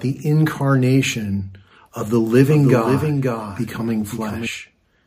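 From 2.49 s to 4.47 s the audio is doubled: a second, full-band copy runs roughly half a second behind and a few dB quieter, so each event is heard twice, the repeat dry with no decay or room colour. It begins and ends abruptly. The likely cause is the signal being captured again through a slower path. On a waveform, every transient reappears about half a second later at lower amplitude, and a spectrogram shows the whole pattern duplicated and shifted right.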